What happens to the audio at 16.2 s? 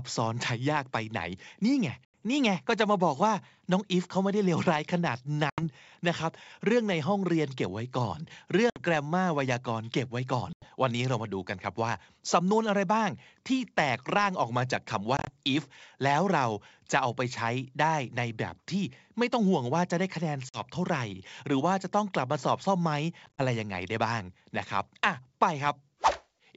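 Nothing goes wrong at 16.2 s: the speech there is intact and continuous, carried cleanly by the G.722 wideband telephone coding.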